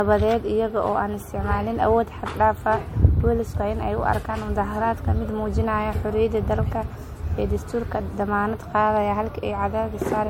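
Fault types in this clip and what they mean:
Generation loss: The speech sounds swirly, smeared and hollow throughout, more than one lossy pass would leave. Consonant attacks are blurred. Nothing is heard above 16.5 kHz. The character points to MP3 at around 64 kbit/s. The likely cause is repeated decoding and re-encoding, about three times. Each pass quantises again on a shifted frame grid. Its noise and spectral holes stack on top of the previous ones.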